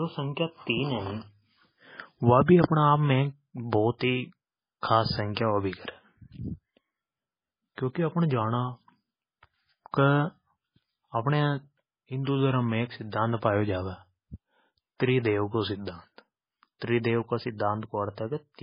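Throughout the speech the sound is dull and watery, with nothing above 5.1 kHz, swirling, metallic chirps on s sounds and smeared consonant attacks. This is likely heavy MP3 compression, where a starved encoder cuts the treble and switches weak frequency lines on and off, which fits a bitrate around 16 kbps.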